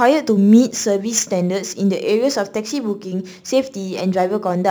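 From start to end the speech carries a crude rate conversion, most consistent with a 48 kHz to 44.1 kHz change made by nearest-sample picking without filtering. The resulting error, roughly 25 dB below the signal, adds a gritty, inharmonic fizz that follows louder, brighter sounds.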